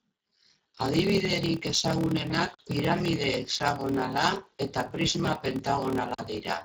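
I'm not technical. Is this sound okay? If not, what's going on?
No. The speech has gone through the Speex codec, a low-quality voice compression that makes it sound hoarse and noisy.

There is also a block size mismatch (padded): tiny gaps are inserted between chunks of audio, producing a steady low buzz at about 38 Hz and slowing the speech to roughly 89% of normal speed while keeping its timbre.

Finally, there are two blocks of digital silence, each a 40 ms hole: one at 2.54 s, just before "piramide hexagonala eta prisma", and one at 6.14 s.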